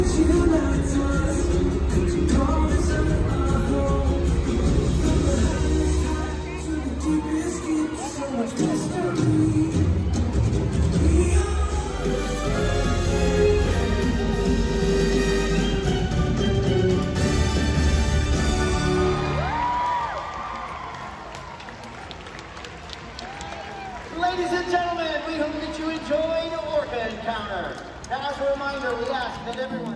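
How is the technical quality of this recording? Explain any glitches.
No glitches, dropouts or other technical faults can be heard anywhere in the recording, and the signal holds steady throughout.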